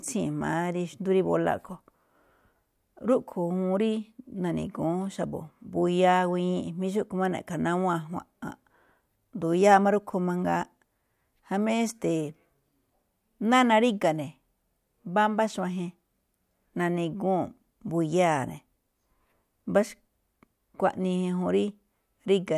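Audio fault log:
Nothing to log here, since this speech recording has no faults anywhere in it.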